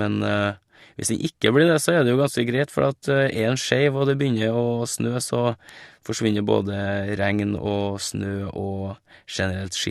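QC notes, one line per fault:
5.69 s, bit error spike: a single sharp tick sits in the speech, with no relation to the surrounding signal. Its extreme brevity and flat, full-band character fit one corrupted sample, where a flipped bit made the value jump by a power of two and return immediately. Because the disturbance lasts only one sample period, its energy spreads evenly across the spectrum rather than taking on any pitch or tone.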